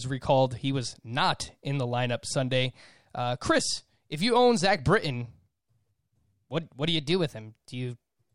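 Near the end, from about 6.97 s to 8.20 s, the speech suddenly runs faster and sharper, roughly 5.8% quicker and raised by about 97.5 cents, close to a full semitone, before snapping back to normal. That's the signature of a drift correction step: software keeping two clocks in line most likely jumped the playback rate in one go to rebalance its buffer, so speed and pitch moved together for that stretch.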